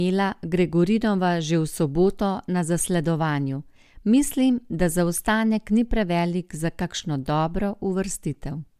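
Nothing stood out as a technical fault on listening to the speech.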